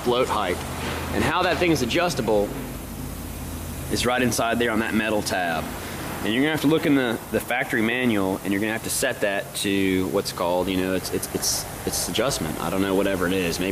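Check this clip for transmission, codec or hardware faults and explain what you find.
One fault is present: mains buzz from 10.98 s to the end of the clip. Switching spikes from a dimmer, a rectifier or a missing shield couple into the chain twice in every 50 Hz mains cycle, producing a dense series of 50 Hz harmonics reaching up to several kilohertz. The result is a steady, raspy buzz, roughly 20 dB below the wanted sound, that sits under everything in those final seconds.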